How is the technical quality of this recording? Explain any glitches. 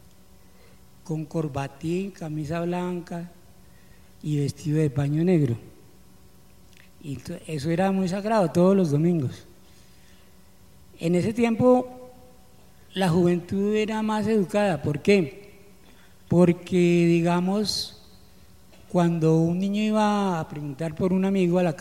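No glitches or technical faults can be heard anywhere in the recording, and the signal holds steady without any disruption.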